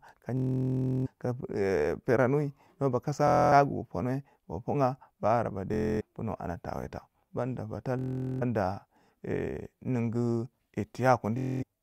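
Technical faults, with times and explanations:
0.37–1.07 s, 3.28–3.52 s, 5.74–6.02 s, 7.99–8.43 s and 11.38–11.63 s: Bluetooth stutter. Packets went missing, so the receiver kept replaying one short slice, giving a machine-gun buzz. The audio then picks up further on, as if it had kept playing.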